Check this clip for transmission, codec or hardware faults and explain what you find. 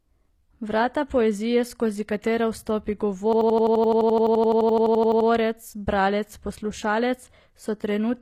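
Two faults are present: codec damage across the whole speech clip, and a hang loop in the middle.

HE-AAC compression: Throughout, the treble sounds synthetic, with s sounds turning gritty and metallic while high frequencies stay bright. This is likely HE-AAC rebuilding the treble by spectral band replication, consistent with a low bitrate around 24 kbps.

System hang loop: From 3.33 to 5.29 s, one 85 ms fragment repeats exactly at about 11.7 Hz, producing a rapid machine-gun stutter. The driver or system stalled while the hardware kept replaying its ring buffer, which fits a 4096-sample buffer.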